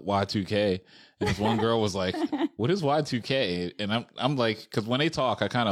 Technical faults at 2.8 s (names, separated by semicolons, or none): none